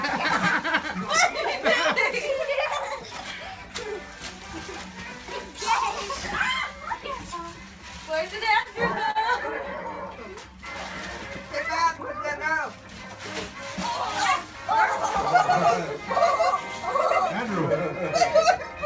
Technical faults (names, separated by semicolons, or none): repeated stalls (stutter)